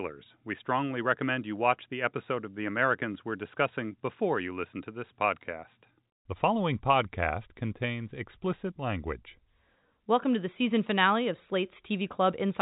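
Nothing stood out on listening to this speech, which comes through G.711 telephone coding with its band ending near 3.8 kHz.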